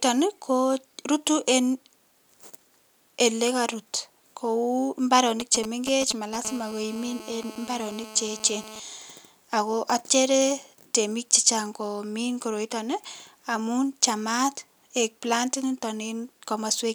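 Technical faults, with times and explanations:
5.4 to 6.36 s, GSM signalling bursts: a galloping dit-dit-dit of short raspy buzzes cuts through the speech at roughly 10 dB below it, unrelated to anything being said. A 2G phone close to the recording chain is sending brief groups of radio bursts, as when it is signalling to the network. The audio circuitry rectifies each burst, so the radio pulses, repeating at about 217 Hz, become audible clicks and buzz fragments.
6.45 to 8.80 s, GSM phone buzz: the broken pattern turns into a steady, harsh, rasping buzz at about 217 Hz, rich in harmonics and sitting about 17 dB below the speech without following it. The nearby phone is now transmitting continuously as in a call, sending its radio bursts 217 times a second. The circuit demodulates those pulses into a square-ish waveform at that rate, which gives the buzz its gritty, multi-harmonic edge.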